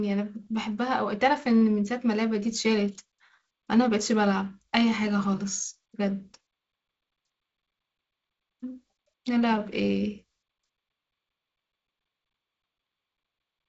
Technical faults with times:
none

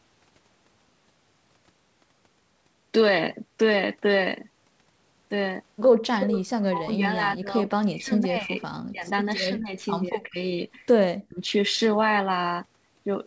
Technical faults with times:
6.16-8.61 speech suppressed in double talk
8.90-9.07 speech suppressed in double talk
9.50-9.75 speech suppressed in double talk
10.05-10.39 speech suppressed in double talk
11.10-11.39 speech suppressed in double talk

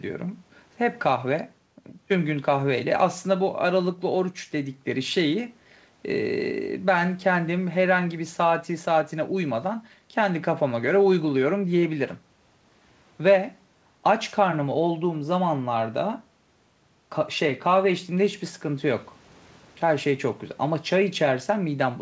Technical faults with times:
none

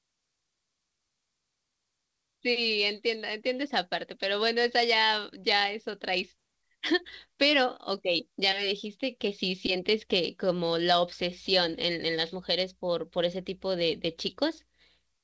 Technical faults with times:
6.38-6.40 skip ahead
6.48-8.42 jitter buffer speed-up
8.85-9.95 jitter buffer speed-up

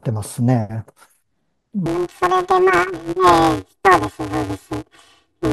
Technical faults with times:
1.86-5.53 planar audio read as interleaved

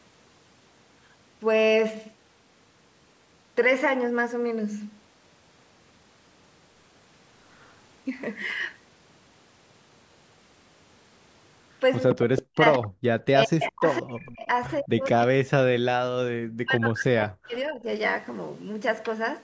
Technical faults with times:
7.58-7.73 echo leak
12.10-12.41 echo leak
12.14-12.97 speech suppressed in double talk
12.73-12.78 echo leak
13.24-14.47 speech suppressed in double talk
14.21-14.47 echo leak
14.81-17.87 speech suppressed in double talk

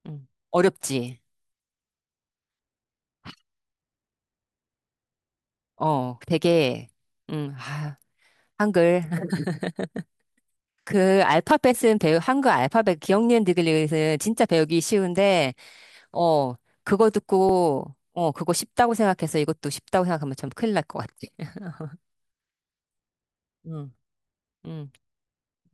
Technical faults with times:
8.51 audio missing between chunks
11.51 audio missing between chunks
17.49 audio missing between chunks
20.49 audio missing between chunks

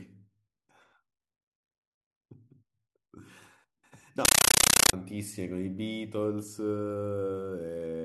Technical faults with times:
4.25-4.93 compressed stream played as audio

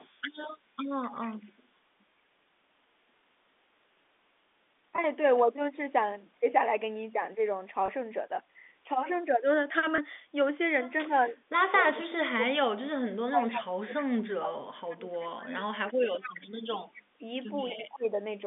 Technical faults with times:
0.00-1.33 echo leak
4.96-4.98 packet loss with pitch repetition
7.86-7.88 packet loss with pitch repetition
9.96-9.98 packet loss with pitch repetition
11.07-18.15 speech suppressed in double talk
11.22-12.06 echo leak
15.50-17.76 echo leak

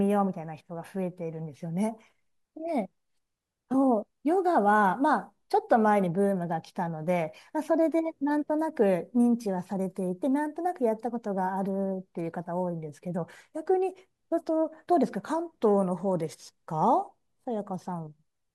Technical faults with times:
none

